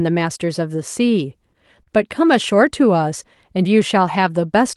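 At 1.82 s the speech hits a short stall from a late packet. The jitter buffer ran dry, so the last sound was stretched by about 40 ms until the packet arrived. Nothing is lost. The sound just holds too long, with a faint buzz or dip, and everything after runs about 40 ms later. The call path's Opus coding limits the band to around 12 kHz.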